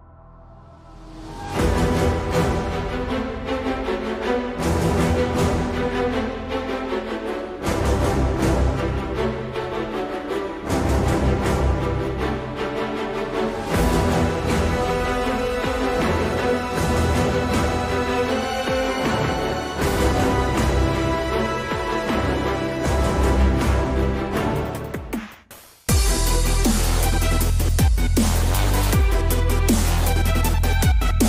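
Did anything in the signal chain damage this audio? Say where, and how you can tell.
No, nothing stood out on listening that would point to damage at any stage of the signal chain.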